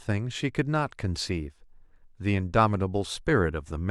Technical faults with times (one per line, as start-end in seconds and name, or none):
none